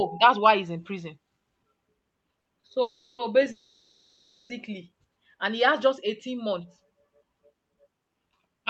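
Speech over what sounds like an Opus call path topped out around 8 kHz. From 2.38 to 2.64 s there are repeated stalls (stutter): four little gaps, the longest 40 ms, bridged by stretched-out sound covering about a third of that stretch, so it drags but nothing's lost. Then come two call audio freezes, 2.82–3.20 s and 3.52–4.51 s, where the last sound is carried on for roughly 0.37 s and then nearly a full second before the speech picks up right where it stopped, most likely packets held up in transit draining the jitter buffer.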